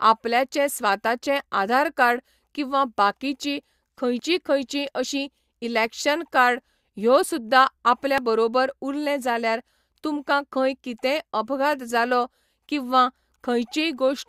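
Overlap between stream segments at 4.19 s and again at 8.18 s produces a brief skip each time. At these joins the time stamps of adjacent 2.0-second segments claim the same stretch of speech, so the player discards the supposedly doubled part even though it was never actually repeated. About 5 to 6 ms of real audio disappears, and the waveform leaps straight from the end of one piece to a later point, heard as a tiny tick or skip.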